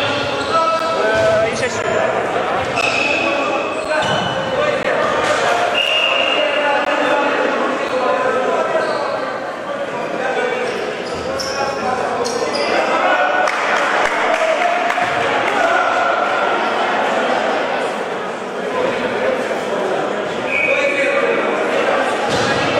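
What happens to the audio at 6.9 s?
At 6.85 s there is a gap between stream segments: a brief hole of about 15 ms with hard edges. Where two segments meet, their timestamps leave a small space, which fits 1-second segments, and the player fills it with silence. Unlike a dropout or lost packet, no audio is removed. The sound before and after is complete, and everything after the hole is simply pushed about 15 ms later.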